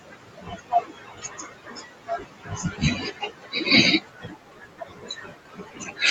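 Noise suppressor artifacts run through the whole recording. The suppressor lowers the bands it judges to be steady noise frame by frame, so the room noise, sitting about 16 dB below the speech, dips in the gaps and returns under the talking. That pumping residue is what separates it from a plain noisy recording.

From 0.0 to 3.67 s, speech cut by the noise suppressor takes over. The suppressor treats parts of the speech itself as noise and pulls them down by as much as about 18 dB, across roughly three seconds of that stretch. Soft consonants and word endings sound swallowed or faded. The cause is that the suppressor misjudged the speech as noise; the background is not actually masking it.

The same speech cut returns from 4.0 to 6.01 s, with drops again reaching about 18 dB over about two seconds. Unlike a codec band limit, which removes everything above 8 kHz here on every sound evenly, these losses come and go with quiet syllables.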